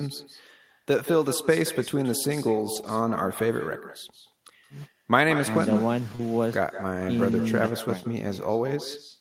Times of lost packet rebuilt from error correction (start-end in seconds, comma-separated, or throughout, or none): 2.75-2.89, 6.19-6.21, 7.32-7.34